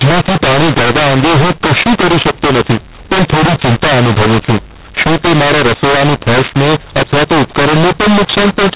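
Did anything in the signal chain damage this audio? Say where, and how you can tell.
Yes. The codec stage: it's a mu-law and A-law mix-up running the whole clip. The speech was coded as mu-law but decoded as A-law, so levels get scrambled, the speech turns harsh and gritty, and the pauses fill with hiss instead of going quiet.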